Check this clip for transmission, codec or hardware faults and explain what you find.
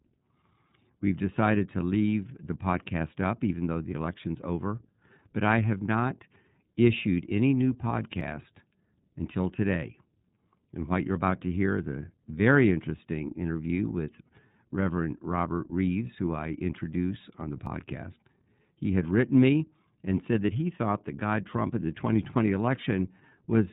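Two faults are present: codec coloration throughout the speech and three brief skips.

Throughout, the speech sounds slightly rough and synthetic, with nothing above 4 kHz. This is iLBC codec damage: narrowband coding of each 30 ms frame independently, which fits the 13.33 kbps mode.

At 8.21, 17.67 and 22.25 s, the sound makes small forward jumps, the first losing about 20 ms and the others a few milliseconds, likely a dropped buffer (overrun).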